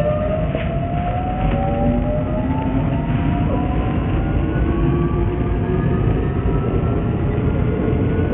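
The sounds in this recording were likely squeezed through Bluetooth SBC compression on a starved bit pool, with damage heavy enough to point to a link running near 48 kbps. SBC's coarse sub-band allocation leaves the upper bands with no bits at all, so nothing survives above about 3.7 kHz for the whole clip. The remaining bands are roughly quantised, adding a gritty, grainy noise and aliasing that sits on every sound.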